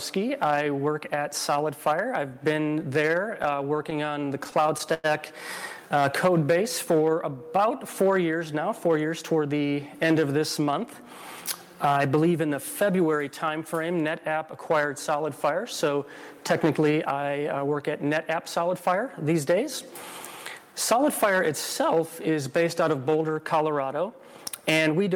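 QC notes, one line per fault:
3.43–5.06 s, repeated stalls (stutter): packets kept arriving late or slower than playback consumed them, so the jitter buffer emptied 18 times in about 1.6 s. Each time the receiver stretched the last sound to bridge the wait, the longest bridge being 99 ms, and all together about 263 ms, roughly 16% of the stretch, was filled this way. Nothing is lost, but the sound hiccups and drags in a jerky, stop-start rhythm.
5.82–6.93 s, jitter buffer slow-down: the buffer was running short of audio, so the receiver built up a reserve by repeating single pitch periods and fragments of pauses many times over. This added 86 ms across about 1.1 s, slowing playback to 93% of normal speed while the pitch stays unchanged. The sound is audibly drawn out, with sustained parts lingering.
8.88–9.61 s and 20.58–20.92 s, jitter buffer speed-up: both times the buffer had collected more audio than its target, as happens when delayed packets land in a bunch, so the receiver trimmed short pieces of one or a few pitch periods in quick succession to bring the delay down. 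The first stretch lost about a tenth of a second and ran at 111% speed, the second lost a few tens of milliseconds at 108%. Pitch holds steady, but the sound briefly rushes forward.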